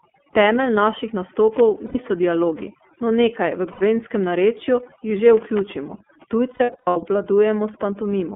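Across the whole speech clip, overdone noise removal has pushed the background to near silence dotted with twinkling specks. The suppressor switched off individual frequency bands near its noise estimate, taking quiet parts of the voice with them. Unlike steady codec roughness, the damage flickers from moment to moment.

The iLBC codec is also present throughout and audibly damages the sound. The line band runs from 200 Hz to 3.4 kHz, so everything above is missing. The voice has a rough, slightly synthetic grain, which fits iLBC's 13.33 kbps mode with 30 ms frames coded independently.

Lost iLBC frames occur three times. The first runs from 1.86 to 1.96 s, just before "dialogi no nekaj v". The second runs from 3.72 to 3.81 s, between "dialogi no nekaj v" and "narečju jih že". Each lasts about 90 ms, which points to three 30 ms frames. Between 6.54 and 6.97 s, 300 ms is lost in scattered pieces, the longest roughly a tenth of a second. 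These gaps are not silent. The decoder repeats the last pitch cycle mixed with noise, so each gap sounds like a held, buzzy vowel, and the voice returns to normal almost immediately afterwards.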